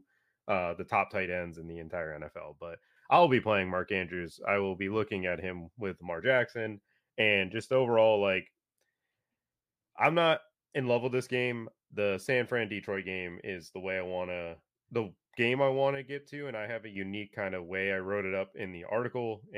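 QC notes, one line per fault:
2.36–2.97 s and 15.95–16.96 s, one channel drops out: likely loss of one stereo channel, so the mono-summed speech abruptly falls about 6 dB, then recovers.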